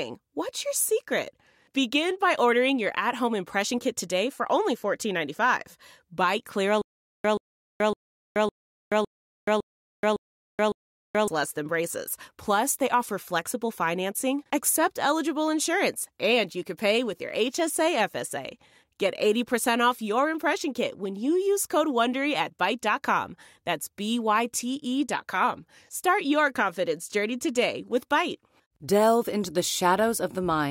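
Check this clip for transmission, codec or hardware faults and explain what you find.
There is one fault in this speech clip. Stutter with silent gaps, from 6.82 to 11.28 s: a 130 ms fragment of sound plays, then about 427 ms of digital silence follows, and the cycle repeats 8 times at an even 558 ms period. This is likely a playback or stream stall, where each retry replays the last buffered fragment before running dry. The result is a mechanical, metronomic stutter, and the audio that belonged in that span is lost.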